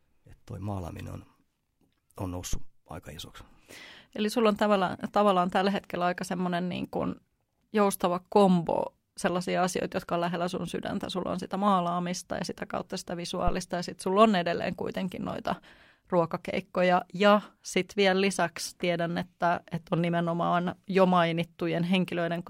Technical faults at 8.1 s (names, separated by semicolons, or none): none